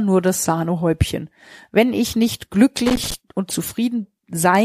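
A speech recording with a burst of loose connector crackle from 2.86 to 3.14 s, where a worn contact rapidly breaks and remakes the signal path. The waveform shows chopped, gapped sections with sharp spikes, and the spectrogram shows irregular broadband vertical streaks.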